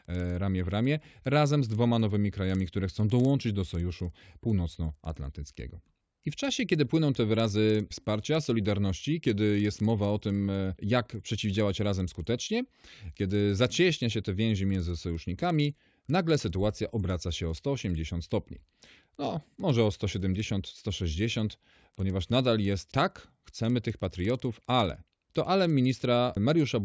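A steady buzz runs under the speech for the whole clip: regular ticks at 20 per second, audible only while there is signal and gone in the pauses. It comes from a resampler restarted on every block. The audio was converted from 44.1 kHz to 16 kHz in separate 50 ms blocks. At each block edge the converter lacked the true neighbouring samples, so every boundary carries a small error that repeats at the block rate.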